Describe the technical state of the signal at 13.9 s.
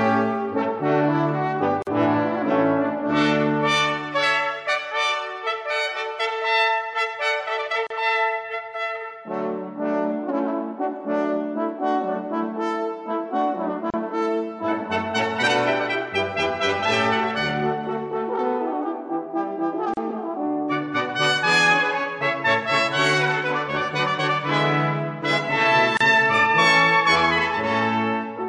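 At 13.90 s the sound drops out. This is a gap at a join of encoded pieces, lasting about 34 ms until 13.94 s. The edges are smeared. Then the sound resumes exactly where it left off. Separately encoded segments were joined untrimmed. The encoder's start-up silence and last-frame padding remain inside continuous sound. The pattern recurs every 6.0 s.

The signal here also carries plainly audible MP3 compression damage, which fits a 64 kbps encode. Weak spectral lines flicker on and off between frames, giving a watery, swirly texture. Transients smear. The likely cause is a bit budget too small for the material.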